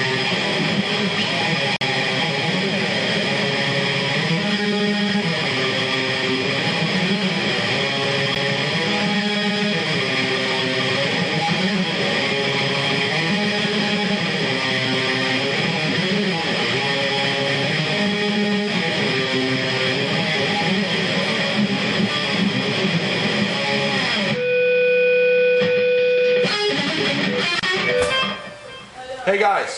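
The audio has two blocks of digital silence: a short hole from 1.77 to 1.81 s, about 46 ms and consistent with a 2048-sample buffer, and a tick at 8.35 s, about 12 ms, fitting a 512-sample buffer. Unlike a fade or concealed dropout, the signal cuts out to silence abruptly with no fade, pointing to missed buffer fills.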